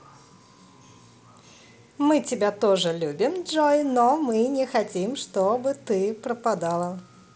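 Listening to this speech recording, nothing stood out as a technical problem.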